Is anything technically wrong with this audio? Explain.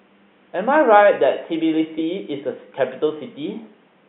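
No, nothing technically wrong stood out on listening to this speech, and the faint room noise, sitting about 41 dB below the voice, is simply part of the recording environment.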